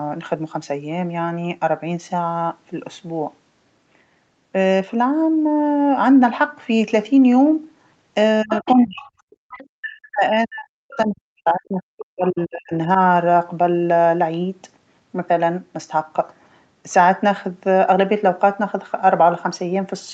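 A speech recording carried over a call, its energy topping out near 8 kHz on the spectrogram as a band-limited call path would produce. From 8.43 to 9.06 s and again from 9.73 to 12.88 s the talker dips by up to about 30 and about 40 dB, likely speech suppressed in double talk, appearing as hollowed, fragmented envelopes in the waveform and gaps in the harmonics. Fainter speech-like scraps at 8.5–8.74, 9.01–9.11, 9.3–9.67 and 10.92–10.97 s, at about 10 to 25 dB below the talker, are likely the other side's voice leaking through, showing as weak, patchy traces among the main harmonics. Between 9.36 and 9.45 s the room sound drops by about 33 dB, background gated by the echo canceller, leaving a brief near-empty vertical band in the noise floor.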